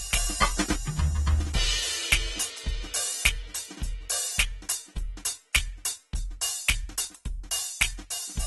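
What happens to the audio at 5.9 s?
At 5.9 s the music carries the same AAC compression damage heard throughout the clip. Nothing is audible above about 11.8 kHz, and the sound is dull, smeared and warbly, likely because an AAC-LC encoder running near 30 kbps discarded high frequencies and coarsely quantised the rest.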